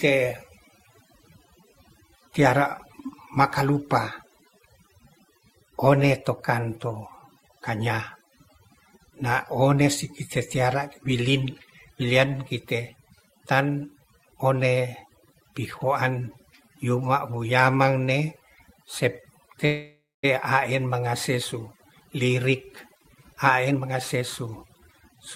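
Speech runs with overdone noise removal throughout: an aggressive noise reducer has pulled frequency bands near its noise estimate almost to nothing, so the background is near-silent with twinkling specks. On a spectrogram the floor looks blank, scattered with isolated bright dots, and the softer harmonics are eaten away. At 19.65 s the sound stalls for about 0.6 s, ending at 20.25 s just before "a en mangase". The last sound is stretched into a fading buzz that drops to silence for roughly the final 0.22 s, and speech then resumes where it stopped with nothing lost. This is likely a call audio freeze after an empty jitter buffer. A waveform shows a smooth decaying repetitive stretch, then a flat gap. From 21.73 s to 25.17 s a jitter buffer speed-up makes the speech run at about 114% speed with unchanged pitch, trimming around half a second as the receiver drains excess buffered delay. 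It sounds hurried, and the waveform shows many tiny splices where short pieces of one or a few pitch periods were cut out.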